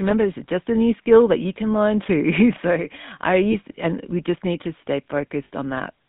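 Throughout, the speech carries GSM full-rate codec damage: a plainly buzzy, gravelly roughness from pulse-driven vocal-tract modelling, consistent with a 13 kbps stream. The spectrogram shows energy confined to roughly 150 Hz–3.6 kHz, with a hard ceiling and blank space above.

Lost GSM frames occur at 1.04–1.07 s, 3.52–3.55 s and 5.44–5.50 s, the last about 60 ms long. Each gap is bridged by repeating the previous frame, heard as a brief metallic ring. On a spectrogram it appears as a smeared band copying the preceding slice.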